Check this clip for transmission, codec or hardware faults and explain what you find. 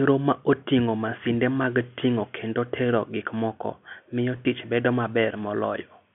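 Two brief dropouts appear in this telephone-band speech, both from packet loss with pitch repetition. The G.711 line coding, which cuts everything above about 3.4 kHz, shows no audible damage of its own.

At 1.63 s, between "ma oting'o masinde" and "ting'o kendo tero gik", about 10 ms of audio goes missing, which fits one lost packet. The receiver fills the gap by repeating the last pitch cycle, so the sound holds for an instant with a faint buzz. On a waveform this shows as a few identical repeated periods. On a spectrogram the harmonics run briefly flat.

From 4.37 to 4.45 s, between "tero gik moko miyo" and "tich bedo", 30 ms is lost in pieces spread over 80 ms, the longest run being 20 ms. The result is a stuttering, slightly frozen buzz. A spectrogram shows short flat harmonic patches, and a waveform shows clusters of copied cycles.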